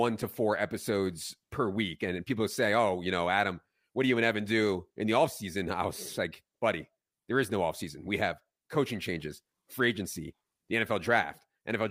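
No technical faults can be heard at any point in the recording.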